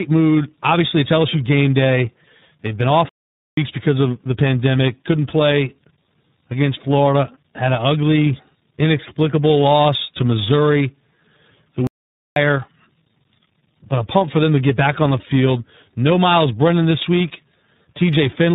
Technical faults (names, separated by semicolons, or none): tandem speech coding; playback stall